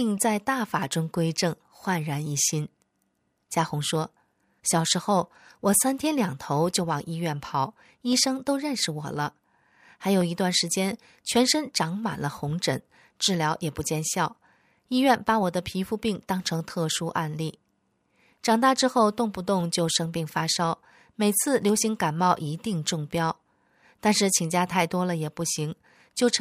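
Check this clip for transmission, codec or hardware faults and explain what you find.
One fault: clock drift buffer slips. From 0.83 s to 25.87 s, around 30 clicks recur every 1.04 s through the speech. Two independent clocks likely disagree by roughly 200 ppm, forcing a few samples to drop or repeat. The strict regularity distinguishes this from irregular packet-loss dropouts.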